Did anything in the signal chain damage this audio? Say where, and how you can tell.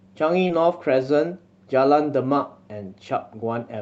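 Yes, at the network stage: short concealed packet loss at 0.47 to 0.51 s. About 20 ms of speech arrived too late or not at all, and the Opus decoder bridged the gap by extending the preceding sound before blending back. That leaves a brief smear rather than the hard silence or click of a buffer dropout.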